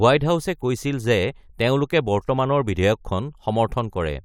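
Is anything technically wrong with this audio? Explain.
No, nothing technically wrong turns up anywhere in this bit of speech, so there's no fault to point to.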